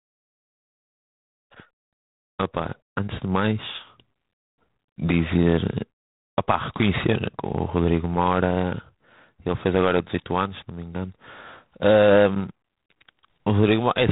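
From start to finish, the speech carries G.726 ADPCM coding damage. The coder sends only a few bits per sample of prediction error. That fits the 24 kbit/s rate. A harsh, rasping hiss rides on the voice and tracks its level. Nothing passes above 3.8 kHz.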